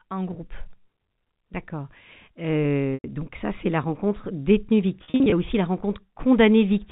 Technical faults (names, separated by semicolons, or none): packet loss with pitch repetition